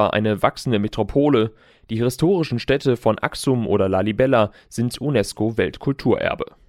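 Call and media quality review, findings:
Clock slip clicks, 0.12–6.66 s: faint regular ticks about every 70 ms, roughly a hundred in all, heard on the speech and not in pauses. Likely cause is unsynchronised clocks between two devices, around 400 ppm apart, dropping or repeating one sample per slip. Spectrogram shows evenly spaced thin vertical broadband lines. Waveform shows single-sample step discontinuities at matching spacing.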